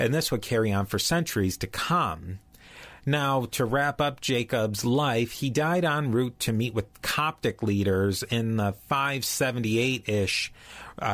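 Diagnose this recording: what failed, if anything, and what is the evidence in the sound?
Nothing in the recording stood out on listening as a failure at any stage of the chain.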